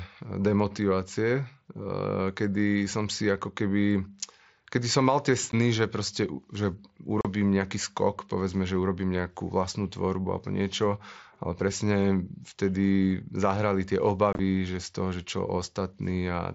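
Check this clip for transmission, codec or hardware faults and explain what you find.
There are three gaps from unconcealed Bluetooth headset packet loss. They fall at 5.52 s, at 7.21 to 7.25 s, and at 14.33 to 14.39 s. Lost headset packets leave blank holes in the speech with hard edges. The gap at 5.52 s is about 15 ms. The middle gap is about 38 ms. The last one is broken into pieces over 60 ms, so it sounds chopped.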